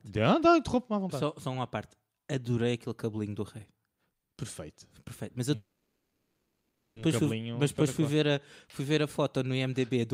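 From 5.55 to 6.98 s the speech stretches into a fading drone, then resumes intact: a call audio freeze, likely from delayed packets emptying the jitter buffer.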